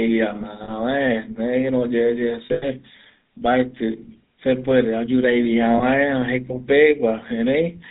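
Throughout, the speech has a buzzy, gravelly roughness and nothing above 4 kHz, the signature of the GSM full-rate codec at what sounds like 13 kbps, which rebuilds the voice from a vocal-tract model driven by sparse, regularly spaced pulses.

Lost GSM frames produce brief rough, metallic rings where the decoder repeats the last good frame: about 40 ms at 0.64 s, a patchier stretch from 2.46 to 2.65 s with the longest hold near a tenth of a second, and a 20 ms catch at 5.78 s.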